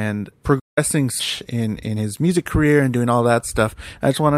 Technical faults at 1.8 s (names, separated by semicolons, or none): jitter buffer speed-up